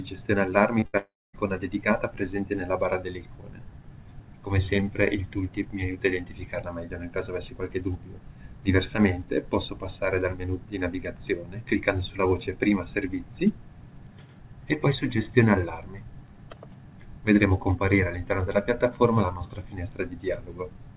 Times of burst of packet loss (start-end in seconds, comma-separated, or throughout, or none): 0.86-0.95